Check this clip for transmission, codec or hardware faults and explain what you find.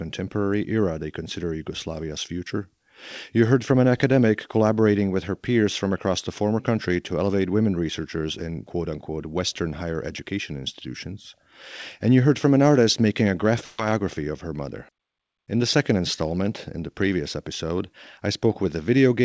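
One transmission fault is audible, heard through a call path whose sound stops at 8 kHz. At 13.64 to 13.80 s, between "an artist making a" and "of her mother", there is a burst of packet loss. The receiver stretched the last sound across the gap for about 140 ms, fading it out. Speech then jumps ahead, with about 140 ms missing.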